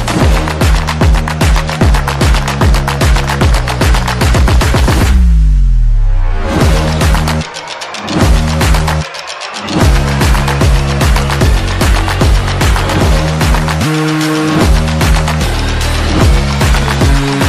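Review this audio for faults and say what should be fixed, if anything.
Nothing to fix: no faults found anywhere in the audio.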